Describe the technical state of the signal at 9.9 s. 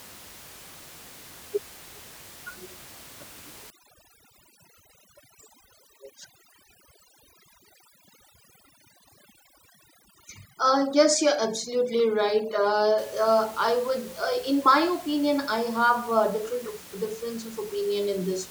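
At 9.9 s the speech falls within overdone noise removal, running from 3.70 to 12.98 s. Frequency bands near the room noise, which sits about 21 dB below the speech, are cut almost to silence, leaving twinkling specks. Unlike a codec's swirl, the background itself nearly vanishes.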